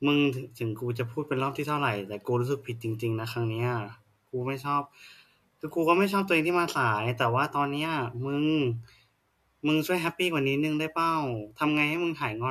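No technical faults occur at any point in this speech recording.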